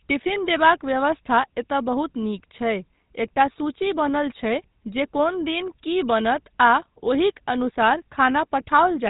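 GSM full-rate codec damage runs throughout the speech. The vocal tract is modelled and driven by sparse, regularly spaced pulses, giving plainly audible buzzy roughness, with nothing above 3.8 kHz, which fits a 13 kbps rate.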